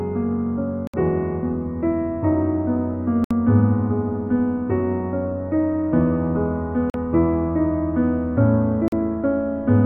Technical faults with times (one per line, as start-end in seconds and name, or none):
0.87-0.94 Bluetooth dropout
3.24-3.31 Bluetooth dropout
6.90-6.94 Bluetooth dropout
8.88-8.92 Bluetooth dropout